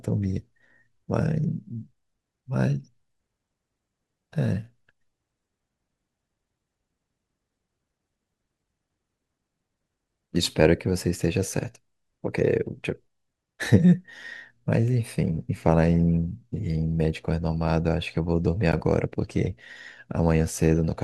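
Speech clip with one corrupt frame decoded from 18.72 to 18.75 s: a single damaged compressed frame was played anyway, putting a brief, fairly loud burst of energy peaking near -10 dBFS at the wrong frequencies. A spectrogram shows a narrow, frame-long vertical smear; the waveform shows a short burst.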